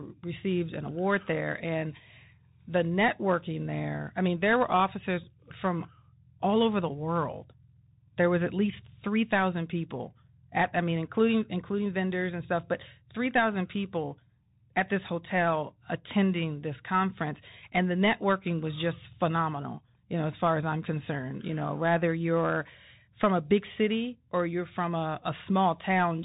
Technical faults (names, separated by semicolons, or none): Bluetooth CVSD headset codec